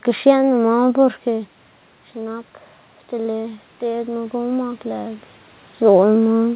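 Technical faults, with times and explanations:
3.1 to 5.27 s, automatic gain rising: the voice and the room noise behind it swell upward together over about two seconds, a slow lift of about 4 dB rather than a sudden jump. The input at the microphone had dropped by about 10 dB, so the automatic gain control judged it too quiet and raised its gain gradually. Because that gain applies to everything picked up, the background climbs in step with the speech.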